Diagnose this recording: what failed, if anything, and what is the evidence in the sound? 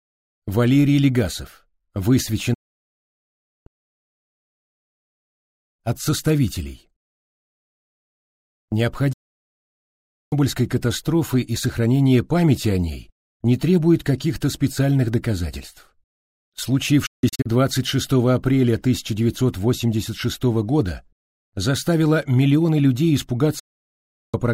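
The sound fades out within about 8 ms and goes silent at 2.54–3.67 s, 9.13–10.33 s, 17.06–17.46 s (several short holes) and 23.59–24.34 s. This is a digital broadcast dropout at the reception stage, where the receiver muted lost or corrupt frames until clean frames returned.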